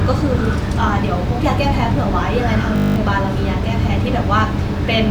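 System hang loop at 2.76 to 2.96 s: the system froze while the hardware replayed one 20 ms buffer ten times, producing a steady 50 Hz buzz.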